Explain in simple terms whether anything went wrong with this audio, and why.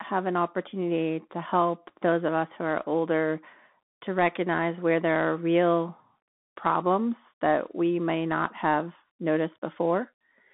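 Yes, the whole speech clip has passed through a Bluetooth CVSD headset codec, the narrowband mode of a call headset. Nothing above about 3.8 kHz survives, so it sounds thin. Unlike a plain phone line, it adds a grainy hiss and scratchy s sounds.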